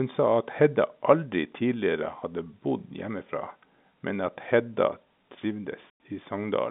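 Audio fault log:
5.90–5.95 s, packet loss filled with silence: the sound drops abruptly to dead silence and snaps back, leaving a hole with hard edges. The receiver got nothing for that stretch and played silence instead of concealing it. About 100 ms of audio is lost, which fits a run of five 20 ms packets. The surrounding telephone-band sound, carried by G.711 A-law coding, frames the gap.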